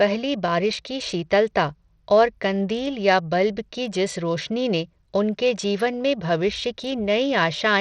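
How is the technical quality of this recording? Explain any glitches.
Technical quality is poor: plainly audible coding damage runs through the whole speech clip. The likely cause is Bluetooth SBC compression, which fits a low bitrate of about 80 kbps. Starved upper sub-bands make the treble flicker, and coarse quantisation adds grit, unlike the steady cutoff of a simple low-pass.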